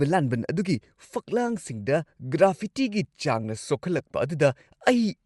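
From start to finish, the speech has likely passed through Bluetooth LC3 compression, a transform codec whose short frames fit 7.5 ms and whose data rate fits about 48 kbps. The upper spectrum is coarsely coded and noise-filled, leaving a plainly audible breathy, grainy edge.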